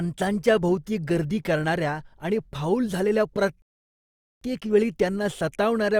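A playback stall runs from 3.62 to 4.41 s: the speech cuts to silence for about 0.79 s, likely because the player ran short of data, then resumes.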